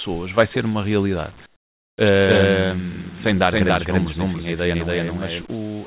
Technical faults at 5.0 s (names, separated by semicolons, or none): doubled audio track